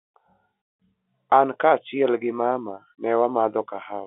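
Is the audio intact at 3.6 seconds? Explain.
Yes, the audio is intact at 3.6 seconds, with the speech coming through cleanly within the narrow band of the telephone coding.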